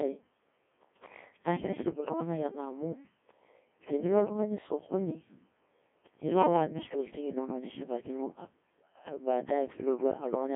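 Codec 2 vocoder processing runs through the whole speech clip. The voice is rebuilt from sine waves using only pitch, voicing, energy and a coarse spectral envelope, which gives a heavily robotic, buzzy sound that fits the 1.6 kbit/s mode. The narrow 200 Hz to 3.4 kHz line band leaves nothing above 3.7 kHz. Hard clipping occurs at 0.00 to 0.09 s and again from 9.28 s to 10.55 s, with peaks overdriven by about 4 dB and then about 7 dB. The stage cannot pass those levels, so the waveform tops are cut flat, adding high harmonics heard as crackle on peaks.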